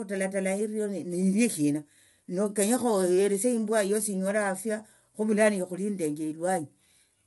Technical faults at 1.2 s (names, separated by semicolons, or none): low-delay AAC compression